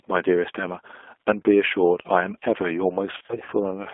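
Throughout, the speech carries G.729 codec damage, plainly audible: the band stops near 300 Hz and 3.5 kHz, and the voice is rebuilt from a vocal tract filter and sparse pulses, giving a rough, slightly synthetic texture consistent with an 8 kbit/s G.729A stream.

From 3.12 to 3.53 s, VoIP packet loss concealed by the speech codec breaks up the sound. About 220 ms of audio is missing in gaps scattered over 400 ms, none longer than 40 ms. The decoder fills each gap by extending its last pitch and filter, producing brief buzzy or noisy, fading stretches, and the voice stays weakened between the gaps.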